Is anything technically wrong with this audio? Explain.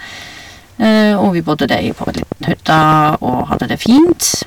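Yes. Hard clipping runs through the whole clip. The speech is driven about 8 dB past what the signal path can carry, so roughly one sample in twenty-five is cut flat. Those flattened peaks add high harmonics. Loud syllables gain a harsh, crackly edge.

A train of clicks starts at 1.63 s, just after "vi bodde", and lasts until 4.43 s. About ten sharp clicks a second arrive at an uneven pace, around thirty in all. They stand roughly 10 dB above the speech. The ticking continues through the pauses. Interference from nearby equipment or a faulty connection or power supply is the likely cause.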